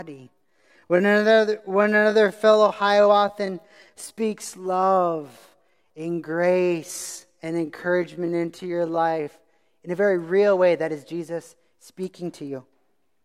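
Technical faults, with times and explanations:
0.00 to 9.26 s, time-stretched section: The speech is slowed to 0.673 times normal speed. The pitch does not drop. It drags. The pace snaps back to normal just before "in a very real". Likely cause: software stretched it by repeating short slices.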